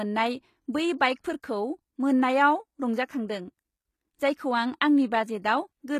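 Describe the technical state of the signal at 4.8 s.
At 4.8 s the speech sits inside damage that runs through the whole clip, likely HE-AAC compression at a rate that fits about 20 kbps. Upper bands are rebuilt by copying lower ones, so harmonics misalign and s sounds turn gritty and lispy, with nothing above 19.8 kHz.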